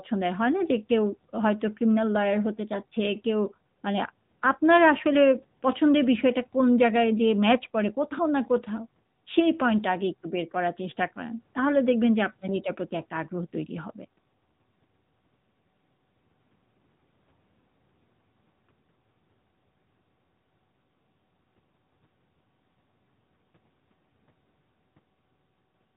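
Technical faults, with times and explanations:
Throughout: AMR narrowband mobile codec. Everything stops near 3.8 kHz, so the speech sounds boxed-in and phone-like, and the pulse-driven vocal-tract model leaves a plainly audible buzzy, synthetic edge that fits a mid-range rate around 10 kbps.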